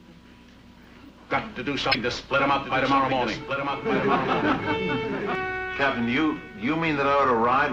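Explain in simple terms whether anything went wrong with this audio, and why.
A short glitch cuts through the audio from 1.89 to 1.95 s. This is damaged data in a compressed stream: part of the file was corrupted, so the player misread that bit and lost its place.

From 2.11 to 5.35 s, a second, quieter copy of the sound plays about one second behind the first, then stops abruptly. This is a doubled audio track, most likely the same audio mixed in twice, with one copy running late.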